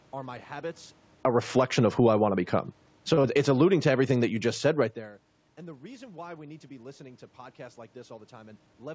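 Just after "are my habits", from 1.1 to 2.23 s, the automatic gain falling pulls the level down by about 6 dB because the control judged the input too loud or its background noise too strong. The speech and the room noise behind it sink together over that second rather than dropping at once. Overlapping it, from 1.46 to 2.68 s, an automatic gain rising step reverses course and lifts the gain by about 5 dB. Voice and background swell back up in one slow, shared push, a pumping that is distinct from the talker's own shift in distance near 1 s.

A second automatic gain falling runs from 2.97 to 4.91 s, again cutting about 6 dB, and the speech and background settle lower together. Inside that span, from 3.14 to 3.20 s, comes a short stall from a late packet. The jitter buffer ran dry, so the receiver stretched the last sound for 37 ms until the packet arrived and then resumed without losing anything. 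It is heard as a held instant with a slight buzz or dip. Right after it, from 3.22 to 3.26 s, a short concealed packet loss replaces 20 ms that never arrived with an extrapolation of the preceding sound, leaving a brief smear before the real audio blends back in.

From 3.75 to 4.28 s, a further automatic gain rising of about 3 dB brings the whole mix gently up again.

After "listening to podcasts like", from 8.52 to 8.83 s, a jitter buffer speed-up trims the excess delay. The receiver cuts out roughly 50 ms in small pitch-period slices, so the speech plays at 113% speed with unchanged pitch and sounds briefly hurried. Throughout, the G.722 call path leaves nothing above 8 kHz.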